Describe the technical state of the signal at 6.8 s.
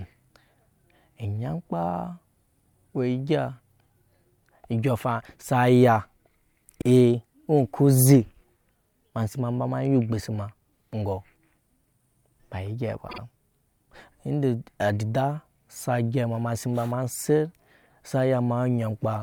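At 6.81 s the speech hits a repeated frames fault, running to 6.85 s. A 48 ms block of compressed audio was decoded and played a second time, so that fraction of a second sounds twice in a row. The length fits a pair of codec frames being duplicated in the stream. It is heard as a brief stutter. The playback is 48 ms longer because of it.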